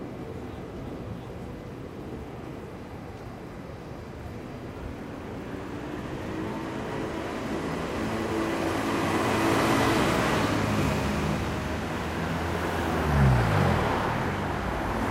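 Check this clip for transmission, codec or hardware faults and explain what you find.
One fault turns up: an overlap between stream segments at 10.82 s. Two neighbouring segments claim the same few milliseconds, and the player trims the shared span even though that sound was never doubled. About 5 ms of audio simply disappears, so the waveform jumps straight from one point to a later one and you hear a brief click or tiny skip. Unlike a dropout, no silent gap or fade is left behind.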